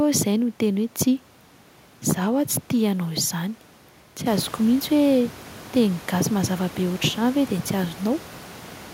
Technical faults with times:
none

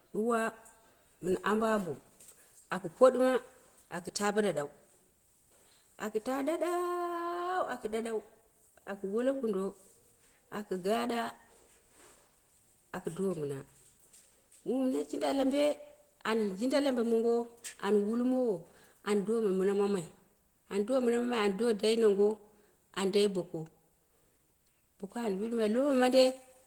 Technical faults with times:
0.00-26.66 Opus compression

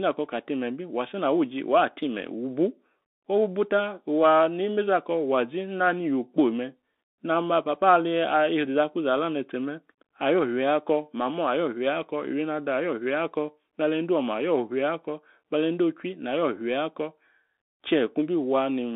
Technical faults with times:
0.00-18.96 Bluetooth CVSD headset codec

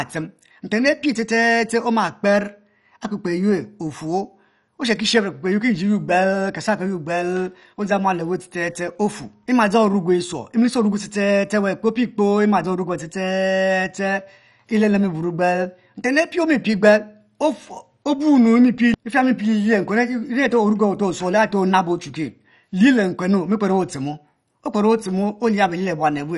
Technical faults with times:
0.00-26.38 MP2 compression

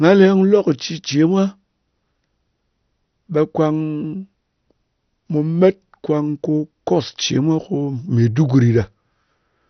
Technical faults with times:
0.00-9.70 MP2 compression

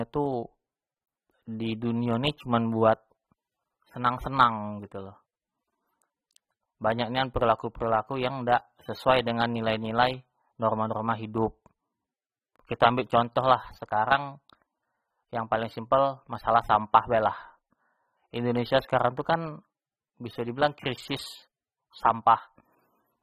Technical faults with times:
0.00-23.22 AAC compression

